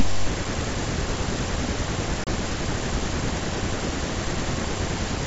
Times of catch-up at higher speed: none

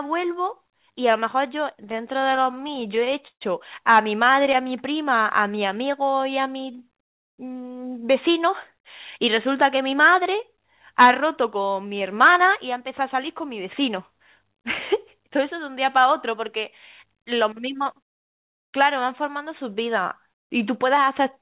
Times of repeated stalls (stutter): 1.76-3.43, 4.25-4.65

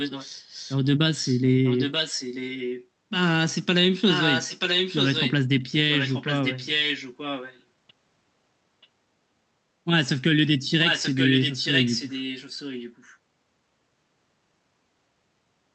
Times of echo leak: 0.00-0.77, 1.14-2.87, 4.07-5.33, 5.90-7.63, 8.82-8.88, 10.85-13.16

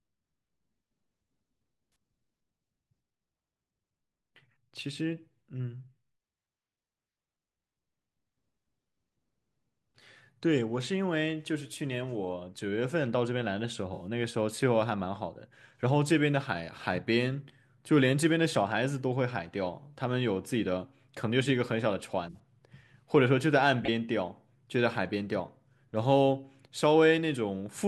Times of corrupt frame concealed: 13.93-14.04, 22.28-22.36, 23.84-23.89

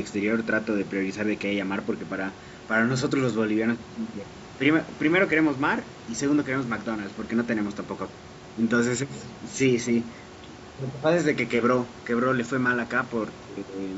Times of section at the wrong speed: none

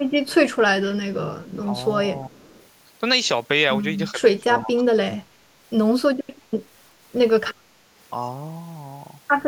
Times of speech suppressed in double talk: 1.64-1.72, 2.12-2.44, 4.11-5.01

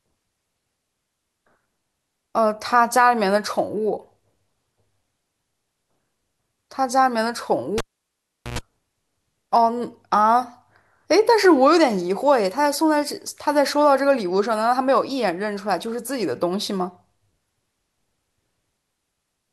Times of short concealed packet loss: none

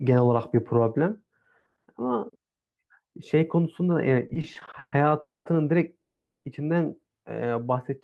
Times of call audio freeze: 5.20-5.47, 6.01-6.46

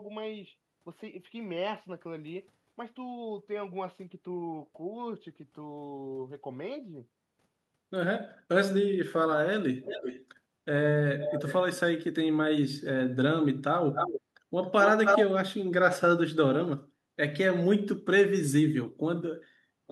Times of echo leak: 9.84-10.26, 11.20-11.55, 13.94-14.21, 14.63-15.25

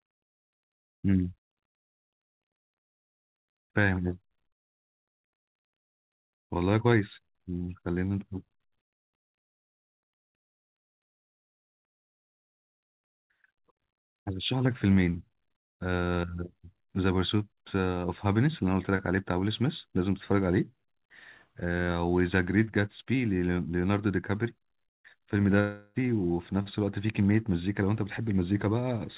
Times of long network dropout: 25.60-25.98

